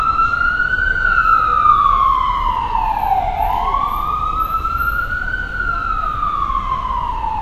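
Throughout the clip, the treble sounds hissy and grainy, with roughened tones and smeared attacks, likely from Vorbis compression at a low setting that fits roughly 33 kbps. Fine high detail becomes noise, and a spectrogram shows nothing above 14.2 kHz.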